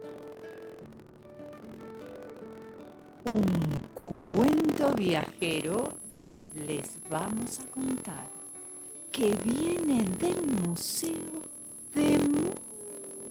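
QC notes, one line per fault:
Throughout: buffer tearing. A steady robotic rattle at 43.1 Hz rides on the sound and drops out wherever the signal does. The rate fits a 1024-sample buffer whose writer and reader have drifted so they cross inside each period. A small slice of every buffer, around a tenth, still holds audio from roughly 70 ms earlier, and the hard joins on both sides of that stale slice repeat once per buffer, producing the buzz.
3.27 to 3.36 s: short stall from a late packet. For 70 ms the sound is held in place, stretched with a faint buzzy texture, and then continues from exactly where it paused. The cause is a packet that was not there on time, which left the jitter buffer empty. The receiver extended the last sound until the packet arrived, so nothing is lost, but everything after this point sits 70 ms later.
3.97 to 4.09 s, 4.11 to 4.35 s and 6.10 to 6.52 s: call audio freeze. 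Each time the sound hangs on as a fading buzzy continuation instead of moving on. The three holds last 100 ms, 220 ms and 400 ms, and none of them drops fully to silence. The audio then resumes from the exact point where it stopped, so nothing is cut but gaps are inserted. This is likely due to packets delayed in transit draining the jitter buffer.
5.39 to 13.30 s: switching supply whistle. A thin high whistle appears and continues to the end, sitting about 15 dB below the signal. Its pitch is not fixed. It wanders between 10.85 and 11.04 kHz, which is typical of a switching power supply in an audible burst mode or beating against another supply, with the frequency shifting as the load varies.
11.96 to 12.73 s: jitter buffer speed-up. Over this span the sound runs about 5% fast while keeping its original pitch, so it comes across slightly hurried. The receiver's jitter buffer had built up more delay than it targets, and to catch up it repeatedly cut out short pieces one or a few pitch periods long. 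Together those cuts remove roughly 40 ms.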